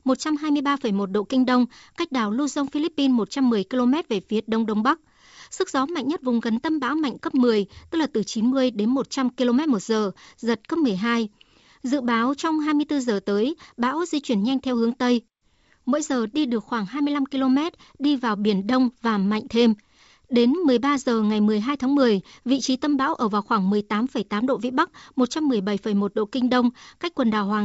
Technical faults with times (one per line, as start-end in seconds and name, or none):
none